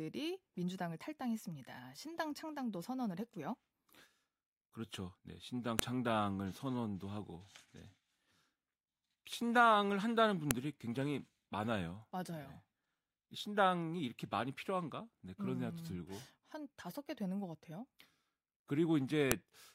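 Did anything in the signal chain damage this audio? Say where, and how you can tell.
Yes. At the storage or file-joining stage, file header played as audio: sharp clicks at 5.79, 10.51 and 19.31 s, each about a millisecond. Header bytes from separately joined WAV pieces decode as samples. Each shows as a lone sharp spike on the waveform and a thin vertical broadband stripe on a spectrogram.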